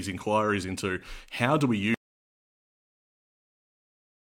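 At 1.94 s speech drops into total silence, an audio dropout to silence likely from a lost input, to the end: flat waveform, blank spectrogram.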